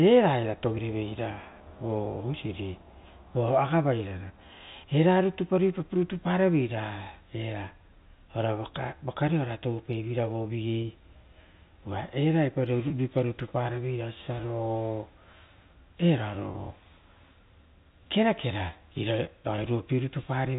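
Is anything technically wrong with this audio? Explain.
Yes, there's packet loss with pitch repetition, five brief dropouts at 4.28–4.30, 10.82–10.84, 12.88–12.90, 16.52–16.54 and 19.56–19.58 s. Each gap of about 20 ms fits a single lost packet. The receiver patches it by looping the last pitch period, so you hear a tiny held, buzzy blip. That's all on top of the narrowband G.711 telephone sound.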